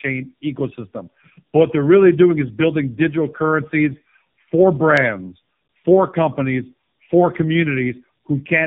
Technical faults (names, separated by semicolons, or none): tandem speech coding